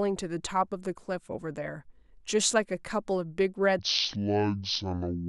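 It's a short speech recording, and from 3.79 s to the end there's a section at the wrong speed: it plays at about 0.565x, dropping roughly ten semitones, likely from a clock mismatch.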